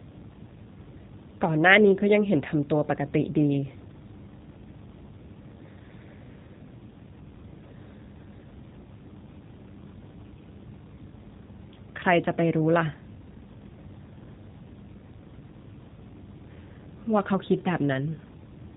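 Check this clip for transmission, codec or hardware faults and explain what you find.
One codec fault runs through the entire recording. The speech sounds narrow, slightly rough and synthetic, with nothing above about 4 kHz, and the damage is plainly audible from start to finish. This is G.729 coding, which fits an 8 kbit/s stream. Instead of keeping the waveform, the codec resends a vocal-tract filter, a pitch predictor and a few pulses every 10 ms, so the speech is rebuilt from a coarse model. That rebuilding is what gives it the buzzy, artificial edge.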